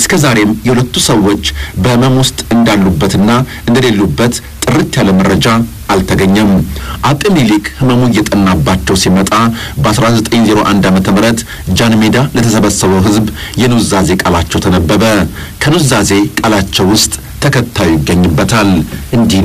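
Hard clipping runs throughout: the signal is driven about 13 dB past the ceiling, so nearly a third of samples are flattened, giving a harsh fuzz on every loud sound.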